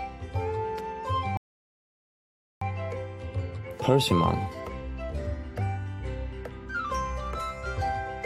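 At 1.37 s the audio drops into silence and stays there until 2.62 s, a rebuffering stall. The player ran dry of downloaded data and simply waited for more, then carried on from exactly the same spot, so nothing's missing, but about 1.2 s of dead air gets added.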